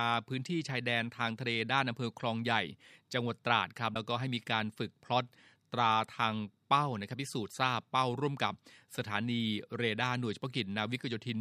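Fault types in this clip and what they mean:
Broken MP3 bit reservoir: from 3.93 to 3.96 s the speech jumps ahead with a brief garbled glitch, about one 26 ms frame long. The likely cause is a cut in the stream, so the next frame pulled its borrowed data from the wrong bytes.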